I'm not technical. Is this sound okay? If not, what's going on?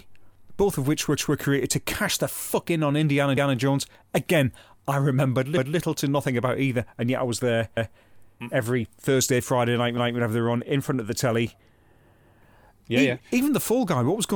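No. The speech has overlapping chunks: every 2.2 seconds, at 1.17, 3.37, 5.57, 7.77, 9.97 and 12.17 s, a fifth of a second plays twice, like a stutter. Unlike a dropout, nothing goes missing; the audio repeats itself at each join.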